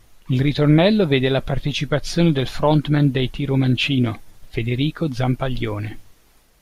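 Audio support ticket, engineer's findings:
No issues stood out on listening to the speech clip.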